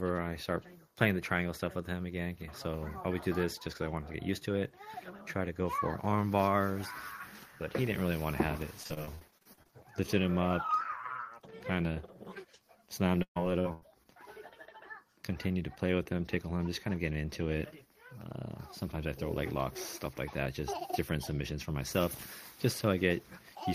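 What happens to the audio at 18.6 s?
Nothing goes wrong at 18.6 s: the audio plays through that moment intact, with no dropout, click or distortion to be heard.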